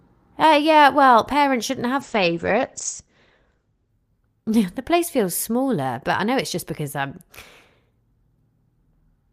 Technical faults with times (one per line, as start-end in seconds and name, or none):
2.02-3.97 call bitrate drop